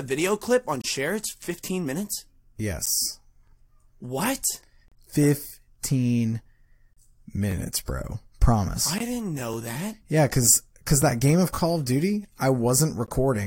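Four gaps between stream segments interrupt the speech, at 0.82 to 0.84 s, 4.88 to 4.92 s, 6.93 to 6.97 s and 8.98 to 9.01 s, lasting roughly 25, 34, 33 and 21 ms. Each is a hard-edged hole of silence where the time stamps of adjacent segments fail to meet and the player pads the difference. The last three sit about 2 s apart, consistent with 2-second segments. The silence is inserted, so no audio is lost.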